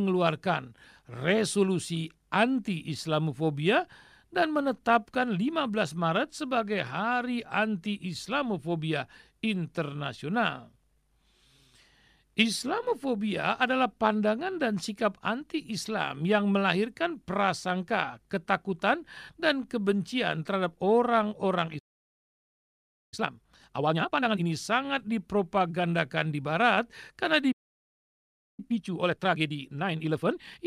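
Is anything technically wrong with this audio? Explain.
Yes. The speech twice suffers a playback stall and then a time-compressed catch-up.

The speech cuts out mid-flow from 21.78 to 23.14 s (about 1.34 s) and from 27.52 to 28.60 s (about 1.06 s). The likely cause is a player starved of data or blocked, falling silent until it recovered. Both waveform and spectrogram show a flat, empty gap.

Time-compressed catch-up follows each gap. From 23.14 to 24.46 s the speech runs at 2.0x, and from 28.60 to 30.60 s at 1.5x. The player drops small slices and cross-fades the rest, so the speech sounds hurried but keeps its normal pitch. The spectrogram shows harmonics at unchanged heights but tightly packed syllables.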